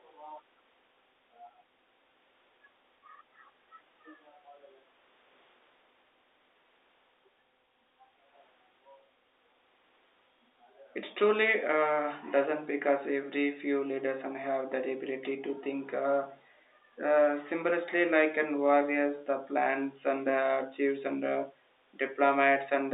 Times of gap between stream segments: none

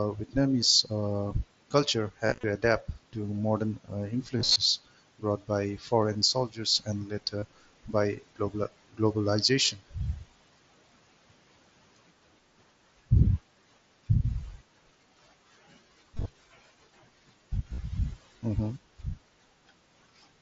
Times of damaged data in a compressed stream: none

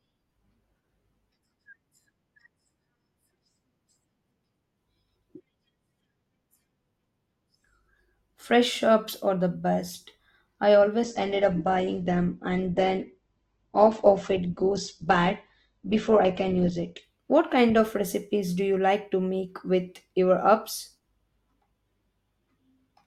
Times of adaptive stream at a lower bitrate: 11.03-17.03

